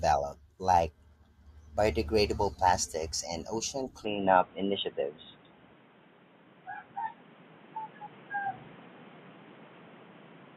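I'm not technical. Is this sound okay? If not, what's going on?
No. From about 4.05 s to the end, the sound suddenly turns duller and more boxy, as if heard down a phone line. Nothing above about 3.8 kHz comes through, a faint new background hiss appears, and the overall loudness shifts a little, with no gap at the change. The likely cause is an input switched to a poorer device: the recording jumped mid-way to a different, lower-quality microphone or headset that can't carry the higher, crisper sounds.

At about 5.00 s there is a tiny blip, a split-second chirp or squeak that doesn't belong to the speech. This is a corrupt frame decoded: the audio was stored in small compressed chunks, one chunk got damaged, and the player played it anyway. The scrambled data put sound in the wrong places for that one brief moment, which is why it comes out as a short, odd noise.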